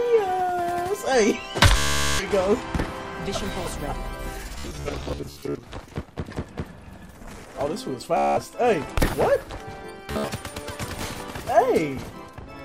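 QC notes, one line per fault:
1.77–2.25, 4.58–5.63, 8.17–8.40 and 10.11–10.30 s, Bluetooth stutter: a buzzy, machine-gun repeat of one short slice, broken into scattered bursts at 4.58 and 10.11 s, then the sound skips ahead. Lost or late packets made the receiver replay its last buffer.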